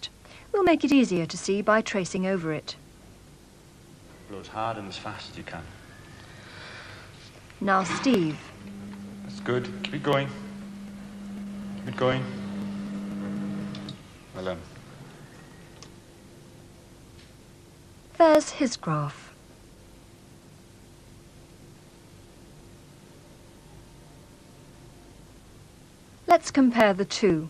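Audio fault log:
0.17–27.30 s: periodic USB or driver dropouts. Every 0.25 s about a millisecond of audio is skipped, and the resulting jump in the waveform sounds as a regular tick.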